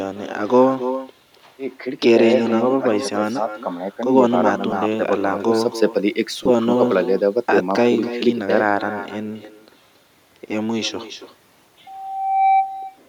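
Throughout the speech, a far-end loudspeaker is feeding its microphone with no echo canceller to remove it. The result is echo with no canceller: every phrase returns roughly a third of a second later, about 11 dB quieter and thinner.

At 4.71–4.73 s and again at 6.43–6.46 s, lost LE Audio frames force the LC3 decoder to reuse the previous spectrum with randomised signs. Each gap, about 15 ms and then 22.5 ms, fits a few 7.5 ms frames and is heard as a brief noisy smear.

From 11.86 to 12.77 s, the microphone picks up the loudspeaker it drives, and the loop gain exceeds unity at one frequency. This loudspeaker feedback squeal is a 773 Hz tone that swells over most of a second, ending a few dB above the speech.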